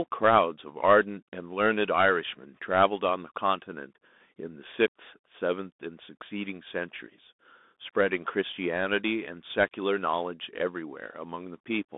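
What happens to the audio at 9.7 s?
At 9.7 s the speech is still passing through a Bluetooth CVSD headset codec, as it does for the whole clip. Each sample is coded as a single up-or-down bit, which fits a 64 kbit/s stream, and the step size has to adapt to keep up. The line band is squeezed to roughly 200 Hz to 3.6 kHz, so the speech sounds thin and muffled. Sibilants turn scratchy, and a plainly audible granular hiss sits beneath it.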